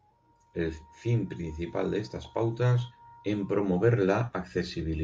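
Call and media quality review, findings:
No transport, playback or processing faults were found in this speech signal.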